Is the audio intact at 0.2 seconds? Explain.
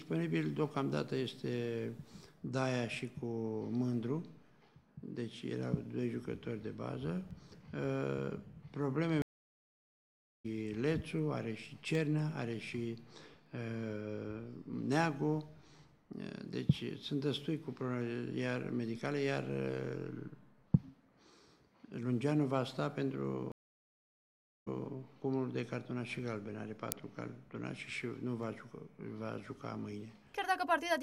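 Yes, the audio is intact at 0.2 seconds, with no fault at that moment.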